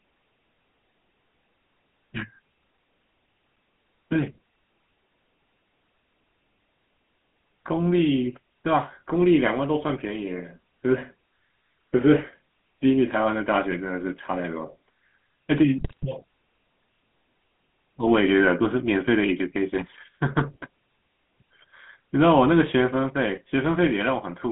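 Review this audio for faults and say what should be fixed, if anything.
The whole clip has gone through the GSM full-rate codec, and you can plainly hear it: a buzzy, gravelly roughness on the speech with the top end gone above about 3.4 kHz, and thin lows under 200 Hz. That comes from a codec that models the vocal tract and drives it with a coarse, regularly spaced pulse excitation, which fits an old 13 kbps GSM stream. To fix it, capture or route the call over a wideband path instead of a legacy GSM leg.

There's also a burst of GSM bit errors from 15.78 to 16.06 s, where the speech suddenly squawks, pops and gargles for roughly a quarter of a second. Corrupted bits were reaching the decoder, so the filter, pitch and gain values it rebuilt were wrong, bending the spectrum and spiking the level frame by frame. The length points to 14 consecutive damaged frames. Preventing it comes down to a stronger radio link or better error protection and concealment on that leg.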